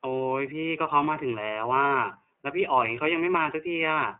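Throughout, the speech passes through the iLBC codec. Nothing above 3.7 kHz survives. Each 30 ms frame is coded alone, leaving a plainly rough, synthetic edge.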